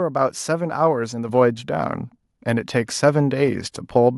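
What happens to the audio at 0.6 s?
Nothing goes wrong at 0.6 s; the speech runs through that moment intact, with no dropout, click or distortion.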